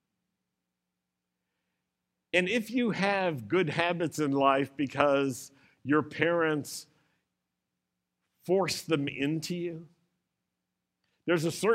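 A speech recording with no audible technical faults.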